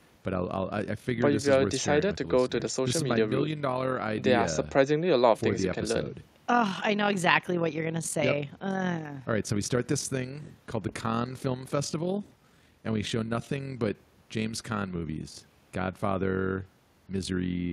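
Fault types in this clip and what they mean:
Overlap-add ripple: The speech was split into windowed frames and joined back together. The overlapping windows do not add up to a steady gain. So the level swells and dips once per frame, by about 6 dB. That happens around 40 times a second, for the whole clip. It sounds like a fast flutter laid over the speech. The effect is a rough tremolo.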